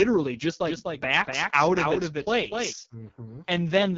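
From start to finish the speech sounds rough and raspy, with nothing above about 7.4 kHz. That is heavy AMR wideband (HD Voice) codec damage, which fits its lowest 6.6 kbit/s mode, where the vocal tract model runs short of bits to describe the voice.

From 0.67 s to 2.73 s a second copy of the speech trails about a third of a second behind, a few dB quieter, dry and full-band, cutting in and out abruptly. This is likely a doubled audio track, with the same signal captured twice along paths of different delay.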